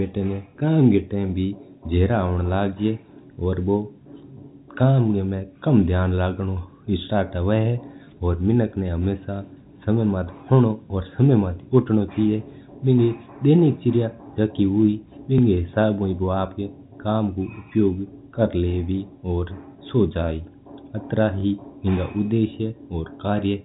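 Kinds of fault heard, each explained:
Overlapping chunks: at 3.34, 9.36, 15.38 and 21.40 s the speech stutters briefly as a 20 ms piece plays twice. The audio was handled in 6-second chunks, each starting slightly before the previous one ended, so every join repeats that overlap.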